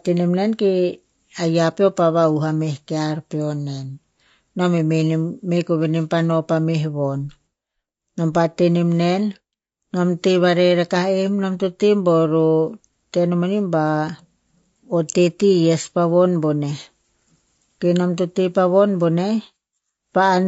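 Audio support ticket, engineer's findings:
Throughout the 20 s speech clip: rough, grainy voice, with noise filling the gaps between harmonics and a thinned, synthetic-sounding top band. Component: likely low-delay AAC compression (AAC-ELD). Short frames blur pitch harmonics; the sound fits roughly 32 kbps. Unlike plain band-limiting, the top band is present but artificial, not simply cut.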